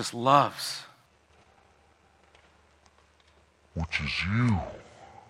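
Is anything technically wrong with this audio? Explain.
Yes. From 1.06 s to the end, the speech has a section at the wrong speed: it plays at 0.618 times its recorded rate, likely from playback against a mismatched clock. Pitch and tempo drop together, about seven semitones, so the voice turns deep and drawn out.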